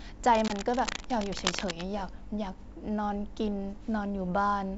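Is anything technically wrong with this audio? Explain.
Yes, two faults overlap near the start.

From 0.31 to 1.86 s, cable scratch noise: dense, uneven rustling nearly as loud as the speech, likely from a worn connector. Unlike hum or hiss, it is irregular and brief.

At 0.48 to 0.53 s, packet loss on an ADPCM call: a hard-edged 20 ms silence, about one packet. The decoder's predictor then has to fall back into step, so the speech returns slightly distorted before settling, which a simple dropout would not have.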